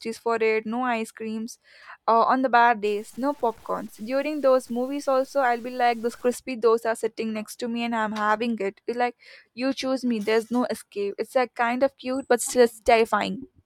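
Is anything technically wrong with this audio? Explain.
Yes. From 2.85 to 6.34 s the speech turns grainy and rough, with a distortion that rises and falls with the voice rather than sitting underneath it as steady hiss. The likely cause is low bit depth without dither: the audio seems to have been truncated to about 8 bits, so the rounding error tracks the waveform and sits roughly 30 dB below the signal. Quiet tails sputter or drop out. On a waveform, low-level stretches look stair-stepped. A spectrogram shows broadband grit that appears and disappears with each syllable.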